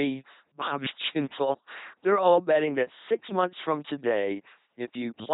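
From start to finish the speech has a buzzing, mechanical robot quality, with rasping buzz and breathy hiss trading places abruptly, and nothing above 3.8 kHz. This is the LPC-10 vocoder at work, with heavy damage: each moment is rebuilt as either fully voiced, from a pulse train, or fully unvoiced, from noise, through a simple vocal tract filter. The coarse, flattened character fits a 2.4 kbit/s LPC-10 encoding.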